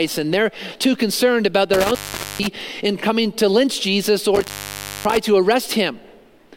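At 1.74 to 2.61 s and again at 4.35 to 5.17 s, an intermittent contact breaks the signal: a loose plug or cable opens for about 0.44 s, then 0.59 s. Crackle marks each break's edges, unlike a clean digital dropout.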